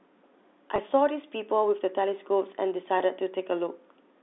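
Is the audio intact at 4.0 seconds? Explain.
Yes, at 4.0 seconds the speech is intact, carried by the narrow telephone band of G.711 coding with no fault at that moment.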